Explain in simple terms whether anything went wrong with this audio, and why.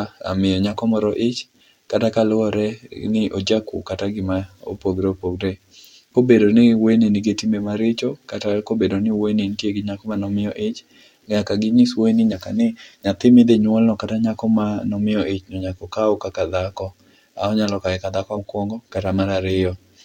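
Compressed frames skipped at 8.66 s (between "nigi timbe maricho kata" and "kobedo ni wuoyi nitie"), 12.31 s and 18.36 s (after "onyalo kawe ka dhako"). Small chunks of the coded speech never played, so it jumps ahead.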